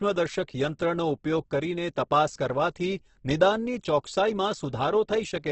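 A speech clip with heavy codec damage throughout: the band stops at about 8.2 kHz, and voiced sounds turn rough and grainy rather than swirly, as bands are noise-filled. This is likely Opus compression in its music mode at a very low bitrate, around 12 kbps.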